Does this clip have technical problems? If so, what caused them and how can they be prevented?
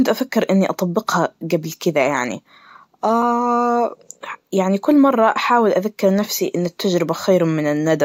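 No, nothing in this speech clip points to a technical problem, so there's nothing here that needs preventing.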